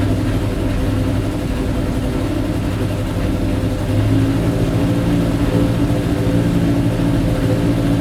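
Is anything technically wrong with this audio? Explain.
No, nothing technically wrong stands out here, so there's nothing to flag in this audio.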